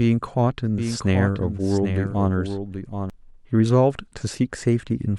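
From 0.78 to 3.10 s a doubled audio track appears: a dry copy about 10 dB quieter trails roughly 0.7 s behind, likely from a slower second capture path.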